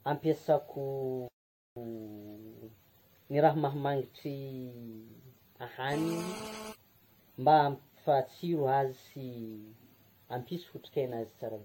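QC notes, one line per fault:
Throughout: generation loss. The speech sounds swirly, smeared and hollow, with blurred onsets, well beyond what a single 64 kbit/s AAC-LC pass would give. This is likely from about ten successive re-encodes on shifting frame grids. Nothing remains above 16.6 kHz. Unlike a single low-bitrate encode, the damage compounds across passes.
1.28–1.76 s: playback stall. The speech stops dead for about 483 ms and then carries on. This is likely because the player's buffer ran dry or its thread was blocked. It differs from a dropout or packet loss because the output simply goes silent until the player recovers.
5.93–6.73 s: GSM phone buzz. A hard, raspy buzz sits at 217 Hz with dense harmonics, about 8 dB below the speech and unrelated to it. It is steady across the span, which fits a nearby 2G handset on a call whose bursts are being rectified. Unlike mains hum, it is rasping rather than tonal and is not tied to 50 or 60 Hz.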